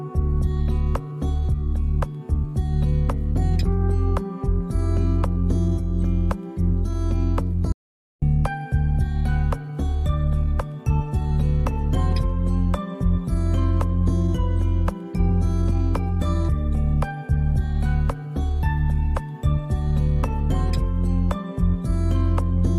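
At 7.72 s the sound cuts out dead and stays gone until 8.22 s, roughly half a second of silence. That's an audio dropout to silence: there's no room tone or hiss in the gap at all, so the input itself vanished while the recorder kept writing silence, likely from a momentary disconnect, a dropped link or a stray mute. Whatever happened in that half second is simply lost, and the sound resumes mid-flow.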